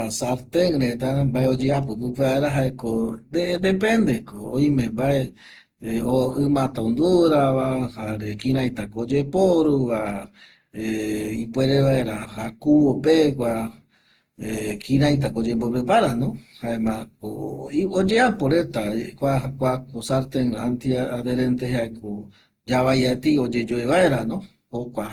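Generation loss throughout: the speech sounds swirly, hollow and smeared with blurred attacks, likely from around seven lossy re-encodes, each adding fresh quantisation noise.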